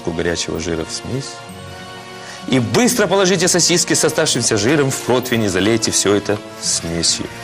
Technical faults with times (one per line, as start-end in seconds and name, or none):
0.00-7.44 MP2 compression
6.93-7.23 DAB burbling